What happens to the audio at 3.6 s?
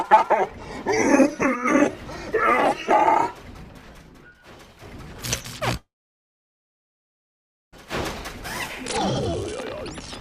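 Nothing goes wrong at 3.6 s: the audio plays through that moment intact, with no dropout, click or other fault.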